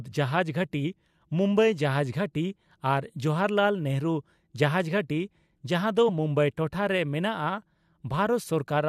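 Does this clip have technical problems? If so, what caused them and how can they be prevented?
Yes. At 6.08 s, between "ᱡᱟᱸᱦᱟ ᱫᱚ" and "ᱢᱩᱢᱵᱟᱭ ᱴᱚᱴᱷᱟ ᱨᱮ", the speech lurches forward: compressed frames skipped, about one 21.3 ms frame missing or rejected as damaged by the decoder. Checksum-verified transfers and error-resilient storage would prevent it.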